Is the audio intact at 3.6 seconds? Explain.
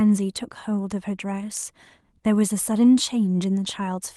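Yes, the speech at 3.6 seconds plays through intact, with no audible fault at that moment.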